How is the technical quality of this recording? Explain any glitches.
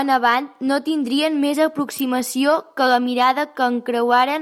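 The recording has one glitch, an electrical switching spike at about 1.99 s, right after "avant no tindrien més". It is a sharp snap laid over the speech, peaking near -10 dBFS. The likely cause is a nearby switch, motor or static discharge arcing, with the audio line picking up that brief burst. On a waveform it shows as a thin, tall spike about 14 ms wide. On a spectrogram it appears as a narrow vertical stripe running across nearly all frequencies.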